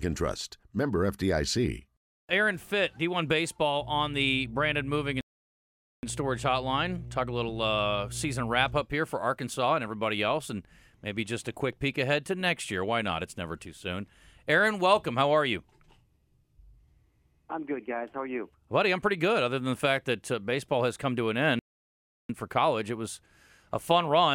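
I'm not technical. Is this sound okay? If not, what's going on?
No, there are two problems in this speech clip.

From about 3.78 to 8.85 seconds there's mains hum, a steady low buzz at 60 Hz sitting under the speech. It comes from the power supply leaking into the recording, usually through a ground loop between connected gear or a transformer sitting too close to a cable. It shows up for those five seconds and then stops.

There are also two playback stalls, where the sound just cuts to silence mid-flow and then picks back up. The first runs from about 5.21 to 6.03 seconds (nearly a second of nothing, and right in the middle of the hum), and the second from about 21.59 to 22.29 seconds (roughly 0.7 seconds). The likely cause is the player running out of audio data or getting held up for a moment before it could carry on.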